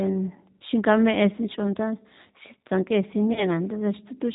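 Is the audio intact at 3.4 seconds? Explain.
No. At 3.4 seconds you're inside a stretch of VoIP packet loss concealed by the speech codec, running from about 3.33 to 3.60 s. Roughly 30 ms of audio went missing, which fits a single lost packet, and the decoder filled the hole by extending its last pitch and vocal tract settings while turning the gain down. You hear the speech smear into a buzzy tone or a coloured noise that fades, and because each frame builds on the previous one, it stays weak and a bit mangled well past the gap itself.

Underneath that, the whole clip is going through the G.729 codec at 8 kbit/s, and the damage is plainly audible at this moment too. It rebuilds the speech from a vocal tract filter, a pitch predictor and a handful of pulses per frame rather than keeping the actual waveform, and nothing above 4 kHz comes through. So the voice sounds dull up top and slightly rough and synthetic, and the concealed gap at 3.4 s sits on top of that already coarse sound.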